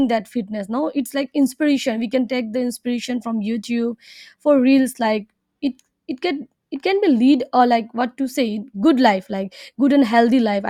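No technical faults can be heard at any point in this speech recording.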